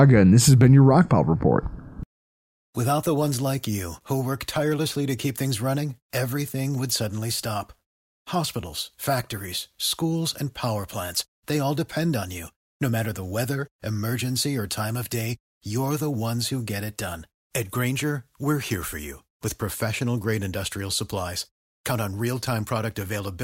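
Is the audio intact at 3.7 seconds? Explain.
Yes, the speech at 3.7 seconds comes through intact, with no audible fault at that moment.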